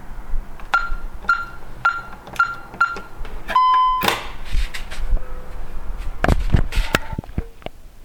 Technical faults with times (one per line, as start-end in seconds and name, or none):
0.00-8.04 clock drift between sender and receiver
1.16-7.83 repeated timing corrections